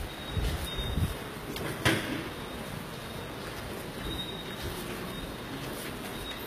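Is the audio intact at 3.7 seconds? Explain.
No. At 3.7 seconds, as throughout the clip, the treble sounds rebuilt rather than recorded, likely from HE-AAC compression at a rate that fits about 20 kbps. Copied upper bands give bright but gritty, metallic highs that stop at 14.9 kHz, unlike a plain low-pass, which would sound dull.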